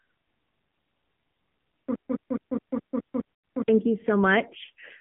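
The whole clip goes through the AMR narrowband mobile codec: the band stops near 3.4 kHz, and the speech is clearly buzzy and synthetic, which fits a low mode around 7.4 kbps. From 1.95 to 3.68 s there's a broken-record loop, a 0.21 s fragment repeating exactly eight times back to back. The stream likely stalled, so the real audio from that stretch is gone. Inside that stretch, at 3.35 to 3.43 s, you get lost AMR speech frames: about 0.1 s of drawn-out, fading concealment, which fits five dropped 20 ms frames.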